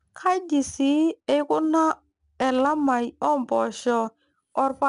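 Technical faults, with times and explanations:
Throughout, 4-bit ADPCM compression: each sample is coded as a coarse 4-bit step from a predicted value, so the speech carries a gritty, plainly audible hiss that rises and falls with its level. Sharp onsets get roughened where the step size can't adapt quickly enough. Nothing comes through above 10.6 kHz, which takes some air off the top and fits a low sample rate running at about 89 kbps.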